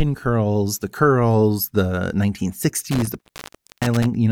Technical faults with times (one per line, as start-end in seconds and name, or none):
2.91-4.06 intermittent contact